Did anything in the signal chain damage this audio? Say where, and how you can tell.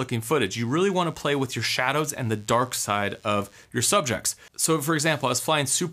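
Yes, in the analogue wiring: DECT cordless phone buzz from 0.50 to 3.65 s, a thin, steady buzz well below the main sound. A nearby DECT handset or base station's 100 Hz radio bursts were rectified by the audio circuitry. A spectrogram shows a comb of harmonics spaced 100 Hz apart, and the waveform shows regular spikes every 10 ms.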